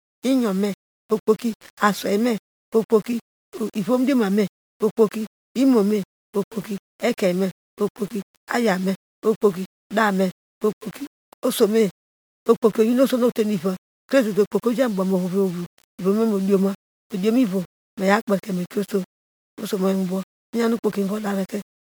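Throughout the speech there's grainy, signal-following distortion from low bit depth without dither, likely only about 7 bits with plain rounding, leaving noise roughly 25 dB below the voice.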